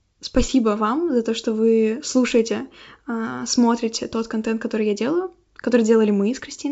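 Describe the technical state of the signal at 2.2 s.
At 2.2 s the speech is intact, with no fault; it passes through G.722 wideband telephone coding at 64 kbit/s, which leaves at most faint coding damage.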